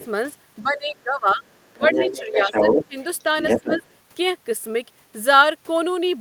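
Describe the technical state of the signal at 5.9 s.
At 5.9 s the signal is intact, with no dropout, distortion, glitch or other technical fault to be heard at that moment.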